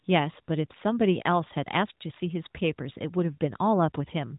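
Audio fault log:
Nothing stood out on listening to this speech clip.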